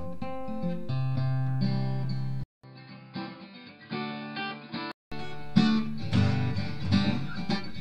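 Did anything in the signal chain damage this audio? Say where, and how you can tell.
Yes. At the input device stage, from 2.44 to 5.12 s the sound turns dull, with nothing above 5 kHz. It drops roughly 10 dB and picks up a faint new noise floor, after a 200 ms gap. This is likely an input switched to a poorer device, reverting at 5.12 s.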